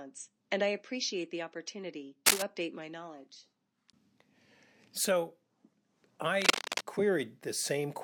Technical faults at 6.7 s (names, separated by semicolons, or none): cable scratch noise